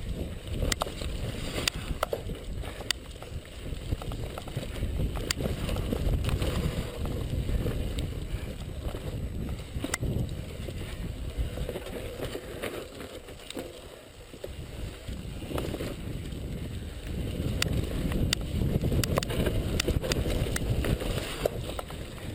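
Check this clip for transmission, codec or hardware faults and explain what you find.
There's one hardware fault here: USB whine running through the whole clip. It's a steady, fixed-pitch tone at 8 kHz, with its strongest component at 16 kHz, sitting roughly 25 dB under the audio. The 8 kHz spacing points to the bus's 125-microsecond microframes. Each burst of current draw ripples through the shared power or ground, and that periodic load leaks into the audio path as a thin, high whistle.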